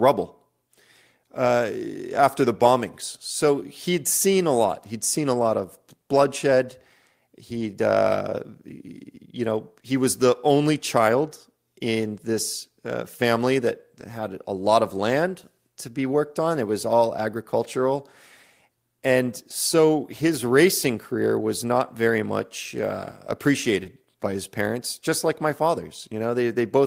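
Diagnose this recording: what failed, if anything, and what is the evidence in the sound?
Lost packet rebuilt from error correction at 7.53–7.67 s, before "uh you know he", and at 23.85 s: lost network packets were replaced by rougher, noisier low-bitrate copies.

Short concealed packet loss at 23.83–23.87 s, before "by his parents just": 20 ms arrived too late, so the decoder extended the previous sound, heard as a brief smear.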